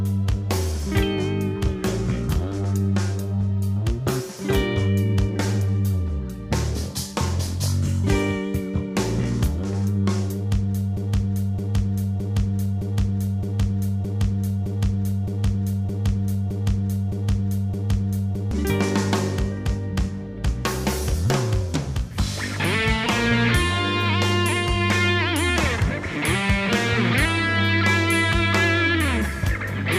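At 10.97 s the playback chain most likely stalls and keeps resending the last fragment it held, producing a broken-record loop. A 0.62 s slice of sound repeats exactly, back to back, twelve times, giving a rigid, mechanical stutter with an identical seam at each restart. The loop runs until 18.51 s, and whatever audio should have played across those seven and a half seconds is missing when normal sound returns.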